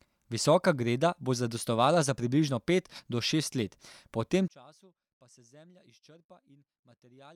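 A speech recording that, from 4.48 s to the end at 7.36 s, right after "šest let po tem", collapses by about 29 dB into a faint residue, the sign of one channel inverted, likely in one stereo channel, so the centred voice cancels when the channels sum to mono. Unlike a plain gain drop or dropout, what remains is only the faint mismatch between the two channels.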